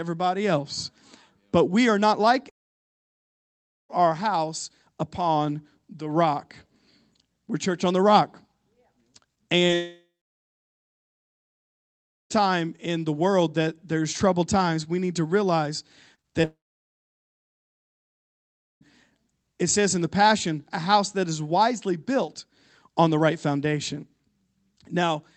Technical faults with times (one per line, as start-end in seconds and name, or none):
2.49-3.91 long network dropout
9.35-9.38 short concealed packet loss
9.66-9.70 short concealed packet loss
9.74-12.42 long network dropout
16.15-16.45 short concealed packet loss
16.45-18.83 long network dropout